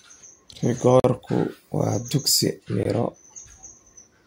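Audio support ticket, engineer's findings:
Two brief dropouts to silence in the speech, 1.00–1.04 s (43 ms) and 2.83–2.85 s (21 ms), sound resuming right after each. Likely Bluetooth stall: interference delayed packets, headphone buffer ran dry, playback paused until resent packets arrived.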